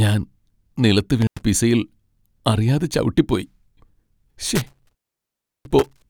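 At 1.21 s the speech drops out briefly, an intermittent contact. A loose plug or cable opens for about 93 ms within the stretch to 1.43 s. Crackle marks the edges. Faint hiss fills the gap. From 4.55 s to 6.04 s it happens again, with a longer opening of about 705 ms.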